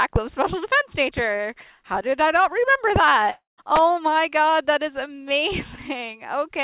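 At 3.3 s the audio breaks off and the last sound is stretched into a fading buzzy tail for roughly a quarter second before dropping to silence or a faint steady hiss, then resumes at about 3.60 s with a gap of roughly 280 ms of material missing. This is most likely a long network dropout, where packets stopped arriving and the receiver's concealment filled in until it ran out. The clip also comes through a call path with nothing above 4 kHz, which fits a narrowband telephone codec such as G.711.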